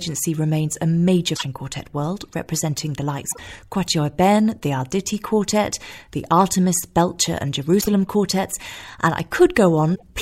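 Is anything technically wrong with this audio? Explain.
Yes. The speech is broken four times by short glitches, each about 0.11 s long, at 1.32–1.43 s, 3.28–3.39 s, 7.77–7.88 s and 9.92–10.03 s. This is damaged data in a compressed stream. Corrupted bytes make the decoder misread those frames, lose its place, and hunt for the next valid frame header before resuming.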